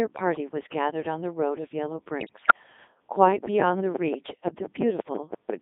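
The whole of this speech recording has been squeezed through a Codec 2 vocoder at 3.2 kbit/s, which transmits only pitch, voicing, level and a coarse spectral envelope and then rebuilds the voice from sine waves, so none of the original waveform survives. The damage is heavy: the voice comes out robotic and buzzy, confined to a line band of roughly 250 Hz to 3.7 kHz with no depth below or air above. From 2.20 to 2.53 s, bit errors on digital voice radio corrupt the vocoder stream at a rate of around 5 percent. Because each bit in such a low-rate stream steers a whole frame's pitch, level, voicing or spectrum, the disruption hits about fifteen frames, and the synthetic voice lurches in pitch and loudness, changes tone colour abruptly, and breaks into warbling, bleeping gibberish. From 3.28 to 5.51 s, a train of clicks runs over the sound at a steady 5.84 per second, roughly fifteen near-identical pops standing out by around 15 dB. 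They are most likely interference from nearby equipment or a faulty connection or power supply, and they tick through the pauses too.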